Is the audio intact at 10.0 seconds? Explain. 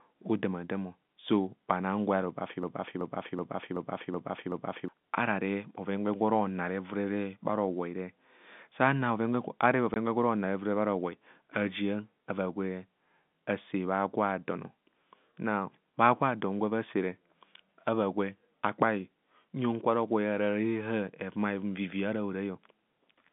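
No. Just before that point, from 9.94 to 9.96 s, a single voice packet was lost in transmission and the receiver filled the gap with silence, the fault known as packet loss filled with silence. The result is a 20 ms hole cut cleanly into the telephone-band speech, with abrupt edges where the sound drops to nothing and returns, so the dropout comes across as a brief gap right around 10 seconds.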